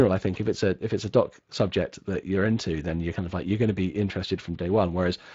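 Speech carrying Speex codec damage from start to finish: a hoarse, noisy quality in the voicing, consistent with a CELP encoder running around 20 kbps, rather than the watery swirl of transform codecs.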